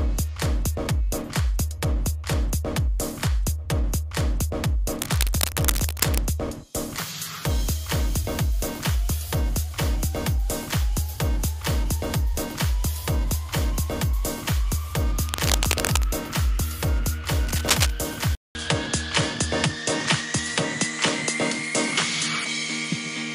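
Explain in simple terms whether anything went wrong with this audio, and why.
Cable scratch noise appears from 4.99 to 6.19 s, 15.26 to 16.08 s and 17.47 to 17.90 s. Bursts of scratchy rustling sit over the sound, loudest in the last one. A worn cable or connector being moved is the likely cause, its shaky contact spraying noise into the signal.

Input switched to a poorer device happens at 18.35 s. After a fifth of a second of silence, the sound returns duller, with nothing above 10.5 kHz, though about as loud. This likely means the recorder jumped to a lesser microphone for the rest of the clip.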